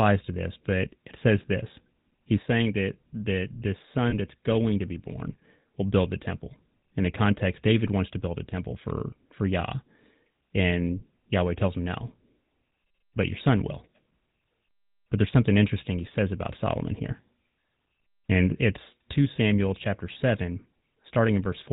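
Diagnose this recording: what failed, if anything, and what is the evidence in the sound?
The codec stage is at fault throughout. The speech has the buzzy, gravelly roughness of the GSM full-rate codec, plainly audible and consistent with its 13 kbps coder. It models the vocal tract and excites it with a sparse, regularly spaced pulse train, so fine detail in the excitation is lost. A spectrogram shows a hard ceiling at 4 kHz with nothing above it, and smeared, grainy harmonics below.

A second fault, at the network stage, a lost GSM frame, runs from 4.10 to 4.14 s. The gap fits a single missing 20 ms frame. The decoder replays the last good frame's parameters, so the sound briefly freezes into a rough, metallic ring instead of dropping out. On a spectrogram the harmonics stop evolving and run flat across that span.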